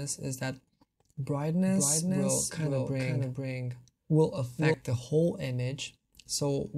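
From 1.66 s to 4.74 s there is a doubled audio track: a second, full-band copy of the sound runs about half a second behind the original and a few decibels quieter. It has no decay or room colour, and it cuts in and out abruptly at those times. The likely cause is a second capture through a slower path, or an edit holding two copies out of step. On a spectrogram every feature appears twice, offset in time. The waveform shows a displaced, smaller twin of each envelope.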